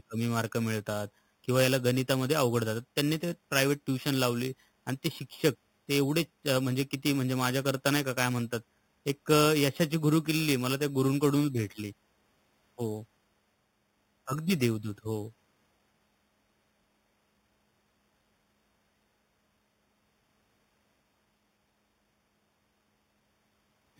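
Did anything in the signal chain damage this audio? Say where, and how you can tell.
Yes: throughout, the speech carries a metallic fizz between 4 and 8 kHz, about 14 dB down, which is imaging from sample-and-hold upsampling from 8 kHz to 48 kHz without a smoothing filter.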